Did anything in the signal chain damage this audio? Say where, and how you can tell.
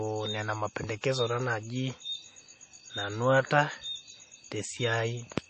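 Yes. The damage sits at the codec stage and runs through the whole speech clip: it likely comes from MP3 compression. Nothing is present above 8.4 kHz, and the encoder's hard treble cut shows on a spectrogram as a flat ceiling with empty space above it. Weak frequency lines switch on and off frame by frame, giving a watery, swirly texture and speckled, patchy high bands. The damage is plainly audible, which fits a low bitrate around 32 kbps.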